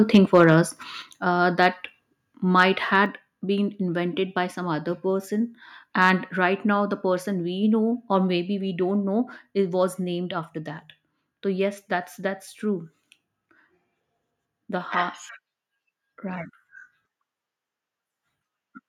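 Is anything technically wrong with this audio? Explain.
Yes. The speech has two kinds of fault.

Microphone overload appears from 0.14 to 0.54 s, at 2.60 to 2.63 s, and from 6.02 to 6.10 s just after "by some other person". The peaks run about 3 dB, then about 1 dB, past the converter's limit, likely because the input level was set too hot, so the converter flattens their tops. A small share of samples clip, giving a harsh crackle. The waveform shows squared-off peaks, and the spectrogram shows smeared high-frequency splatter.

Microphone volume stepped down at 1.02 s, just before "uh that". Voice and background both drop by about 6 dB at once, likely because the call software lowered the input gain after the opening overload. The waveform envelope shrinks abruptly, and the spectrogram darkens evenly across all frequencies from that point.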